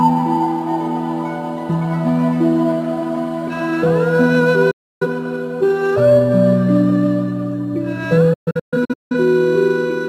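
At 4.71 s a digital broadcast dropout mutes the audio. The sound fades out in about 8 ms, stays silent until 5.06 s and then resumes. Roughly 0.3 s of programme never arrives. The receiver lost lock or rejected corrupted frames and muted until clean data returned. From 8.33 to 9.15 s a second dropout breaks into several short holes spread over about 0.77 s. They total about 0.51 s of silence, and the longest lasts about 0.17 s. On a waveform each hole is a dead-flat line. On a spectrogram it is a blank vertical column across every frequency with sharp edges.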